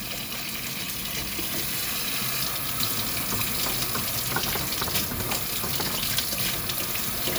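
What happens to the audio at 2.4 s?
Nothing goes wrong at 2.4 s; the audio plays through that moment intact, with no dropout, click, glitch or other fault.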